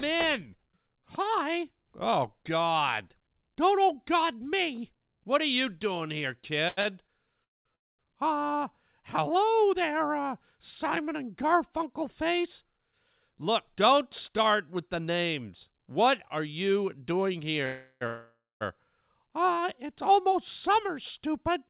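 Between 6.68 and 7.10 s the speech catches and drags three times, with the last sound held and smeared across each break. The longest break is 90 ms, and about 140 ms is filled in all, a third of that span. These are repeated stalls (stutter): packets arrived late or slower than playback, so the jitter buffer kept running dry and the receiver stretched the last sound each time. Nothing is lost, but the flow is broken up.

Four call audio freezes follow. At 7.44 to 7.67 s and again at 7.75 to 8.01 s the sound stops almost completely, with about 0.21 s and 0.23 s of silence, then resumes where it left off. At 17.66 to 18.03 s the last sound is carried on as a fading buzz for about 0.35 s with no true silence. At 18.07 to 18.63 s a held, decaying tone runs for about 0.54 s and includes about 0.19 s of silence. The likely cause is held-up packets emptying the jitter buffer, so the receiver filled the wait and then continued. 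Each freeze inserts a gap without dropping anything, and the clip's delay grows by the gap's length.

From 20.89 to 21.66 s the speech sounds slightly hurried while its pitch stays the same, running at about 105% speed. This is a jitter buffer speed-up. The buffer held more than its target, so the receiver cut out a few tens of milliseconds in small pitch-period slices to bring the delay down. Throughout the clip the G.711 A-law call coding leaves nothing above 4 kHz, which gives the narrow, telephone-band sound.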